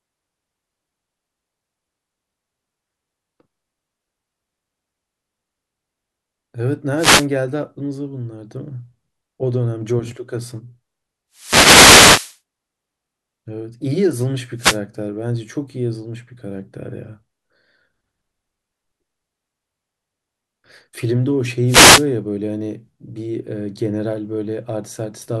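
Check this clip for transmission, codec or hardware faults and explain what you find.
The speech carries four wireless microphone noise hits, all from the radio link rather than from the codec or the recording hardware.

Wireless microphone noise hits occur at 6.96 to 7.27 s, 11.33 to 12.39 s, 14.57 to 14.79 s and 21.66 to 22.06 s. Each is a brief fade in the analogue FM link, where reflected copies of the signal cancel at the receiver and its own noise floor comes up. Each is heard as a swish of static over the voice. The longest, just over a second, is at 11.33 s.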